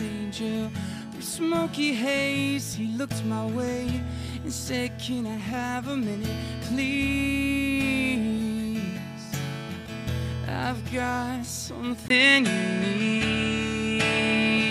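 At 12.08 s a 20 ms gap precedes duller sound with nothing above 11.4 kHz, a level shift of about 5 dB and a faint new noise floor, likely an input switched to a poorer device rather than a mere filter change.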